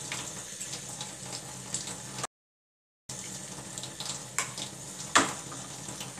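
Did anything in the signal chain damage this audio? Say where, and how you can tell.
Yes. There's an audio dropout to silence from 2.25 s to 3.09 s, roughly 0.84 s where the sound just stops dead and comes back mid-flow. The gap is silent with no room tone or noise floor underneath, so nothing was reaching the recorder. That points upstream at the input stage, likely a disconnected device, a failed link or a stray mute while the recorder kept writing silence. Whatever happened in that stretch is gone.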